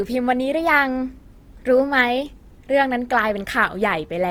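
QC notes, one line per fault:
Throughout, Opus compression, likely. The speech is grainy and rough, with noise-filled bands fitting a rate near 24 kbps. Bandwidth still reaches about 20.2 kHz.
0.54 to 2.29 s, drift correction step, likely. Playback jumps 6.15% faster to rebalance a buffer, raising pitch 103 cents, about a semitone, then snaps back.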